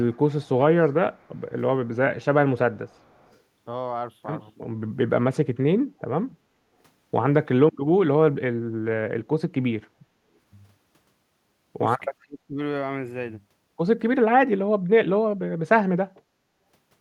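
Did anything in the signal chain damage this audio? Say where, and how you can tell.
Yes, and it happens at the call-processing stage. There's an echo leak early on: faint delayed copies of the speech at 0.03–0.17, 0.42–0.49, 1.14–1.41 and 2.89–3.39 s. Each trails the original by 372 ms and sits far below it, about 35 dB down at first and about 40 dB down later. That's likely a far-end loudspeaker bleeding into its mic, with the echo canceller not fully cancelling it, so scraps got sent back.

There's also speech suppressed in double talk, again in the call processing. At 7.55–7.76 s the level drops sharply, very deep but only for a brief moment. At 12.22–12.59 s there's a shallower dip that takes out most of that stretch. The likely cause is an echo canceller whose suppressor couldn't tell the near talker from its loudspeaker echo while both sides were active, so it turned both down.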